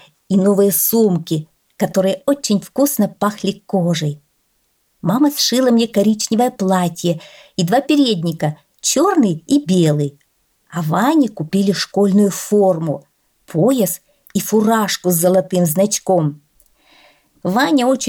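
Careful listening turned up nothing in the audio that stood out as a technical problem.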